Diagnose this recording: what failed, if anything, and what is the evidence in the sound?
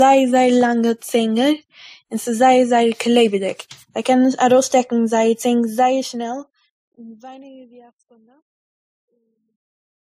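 Codec stage: the speech carries warbly low-bitrate smearing under a second codec's grain throughout, and a spectrogram shows a hard ceiling at 15.2 kHz. This is likely transcoding between lossy codecs, fitting a low-rate MP3 re-encoded as WMA.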